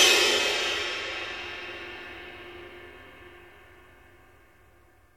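No faults can be heard here.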